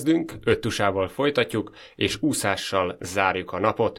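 Nothing technical goes wrong anywhere in this bit of speech, so there's no fault to point to at any moment.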